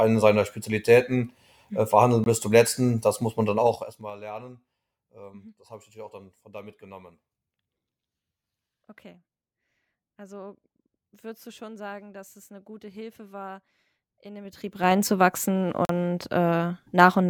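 A speech clip with two kinds of fault. The first is a block of digital silence at 2.24 to 2.26 s, just before "bis zum letzten das". The sound drops to silence for about 21 ms and returns with no fade. A second gap at 15.85 to 15.89 s lasts about 43 ms. Its double length fits output buffers of 1024 and 2048 samples that were not filled in time. The second is zipper noise. After "letzten das muss man", from 3.54 to 4.15 s, the level falls by about 20 dB. It moves in 3 dB steps, roughly ten per second. After "war in den", from 14.41 to 14.96 s, it rises by about 20 dB in the same 3 dB steps, roughly fifteen per second. Each unsmoothed step leaves a small click, so a ticking rides on the voice while the level moves.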